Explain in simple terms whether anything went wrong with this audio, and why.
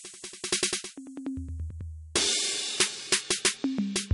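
The music sounds dull and watery for the whole clip, with nothing above 11.2 kHz and a swirly, smeared quality that is plainly audible. That points to MP3 compression, likely squeezed hard enough that the encoder dropped the treble and faint detail to save space.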